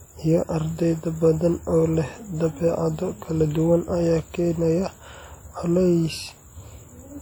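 Throughout this speech clip there is plainly audible codec damage: the sound rings and smears, with a washy quality and a hiss that rises and falls with the signal. This is most likely WMA compression, a transform codec whose quantisation noise spreads over long blocks while weak spectral lines are dropped. The degree of damage fits an encode at around 48 kbps, even though content extends up to about 20.1 kHz.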